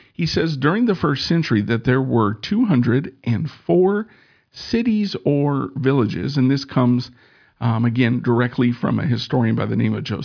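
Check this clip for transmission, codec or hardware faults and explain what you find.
No faults are audible.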